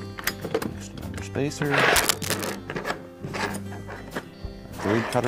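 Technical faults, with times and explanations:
1.96–2.55 s, cable scratch noise: uneven scratching bursts about as loud as the sound, likely from a worn connector moving; broadband smears on the spectrogram, jagged spikes in the waveform.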